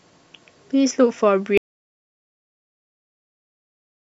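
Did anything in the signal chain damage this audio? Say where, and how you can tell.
Yes. The input feed was likely lost somewhere between the source and the recorder, through a disconnected device, a broken link or a mute, while the recorder kept writing silence. That is an audio dropout to silence. At 1.58 s the speech cuts off mid-flow and never returns. From there to the end the signal is silence with no room tone or hiss at all, so whatever followed is gone.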